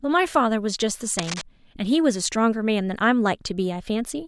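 From 1.19 to 1.42 s, a burst of dense, uneven scratching and rustling sits over the speech, roughly 10 dB below it. This is cable scratch noise, likely from a worn cable or connector being moved, its contact resistance fluctuating rapidly.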